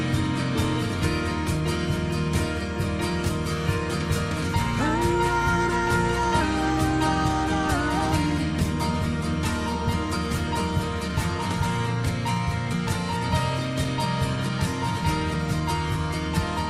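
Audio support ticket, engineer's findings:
Clock drift between sender and receiver, whole clip. Sender clock running fast, around 4%. Jitter buffer keeps overfilling, so the receiver trims short chunks to catch up. You get little timing hiccups, unevenly spaced, start to finish. Likely sender/receiver clock mismatch.

Repeated timing corrections, 11.08 to 15.61 s. Playout sped to 105% here while the receiver cuts short pieces to keep pace with the faster sender. Edits all go one way, uneven gaps; heard, if at all, as slight hiccups or a wobbly tempo. Jitter buffer logic.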